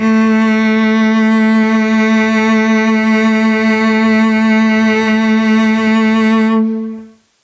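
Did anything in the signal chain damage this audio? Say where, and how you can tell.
Yes. Throughout, the music breathes, swinging around 15 dB, likely gain pumping from excessive microphone gain driving a fast limiter.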